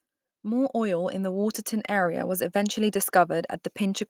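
Speech with automatic gain rising from 0.43 to 3.04 s: the gain control judged the input too quiet and lifted it by about 5 dB over that span. Unlike a talker moving closer, the background noise swells in step with the voice.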